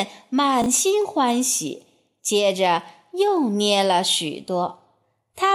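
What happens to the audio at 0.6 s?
At 0.62 s the speech briefly jumbles: a tiny stutter of scrambled sound, lasting until about 0.66 s. This is chunks out of order. One 20 ms chunk arrived or was written one chunk late, so it plays after the chunk that should follow it. No audio is lost, but the two swapped pieces create three hard joins where the waveform jumps, right at the garbled moment.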